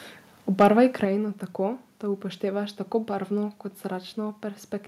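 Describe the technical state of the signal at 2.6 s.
At 2.6 s the speech signal is intact, with no audible technical fault at that moment.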